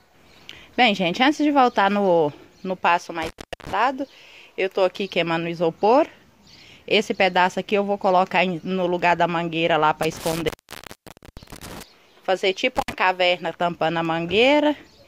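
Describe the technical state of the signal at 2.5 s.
At 2.5 s the signal is intact, with no audible dropout, distortion, glitch or other technical fault at that moment.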